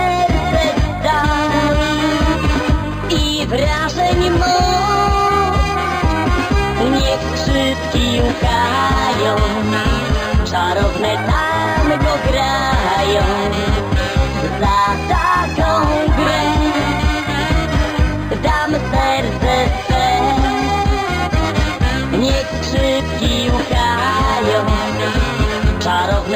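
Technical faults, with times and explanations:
Throughout, imaging from linear upsampling: the top of the band is dulled and a faint mirrored copy of the spectrum sits just above it, from about 5.5 to 11 kHz, roughly 25 dB below the signal, which points to an 11 kHz source raised to 48 kHz by straight-line interpolation. That weak filter leaves the copy, heard as a light metallic shimmer on bright sounds. Unlike codec artefacts, the shimmer is steady and follows the content rather than swirling.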